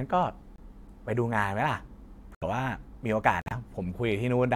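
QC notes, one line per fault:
0.56–0.60 s, 2.35–2.44 s and 3.41–3.53 s: corrupt frame muted. The speech drops abruptly into silence for about 40 ms, 90 ms and 110 ms. Each gap suggests a few damaged compressed frames that the decoder rejected and the player replaced with silence. Concealment would fill a gap with smeared or repeated sound, and a buffer dropout would shift the timing. Here the hole is dead and hard-edged, and the speech after it resumes on schedule.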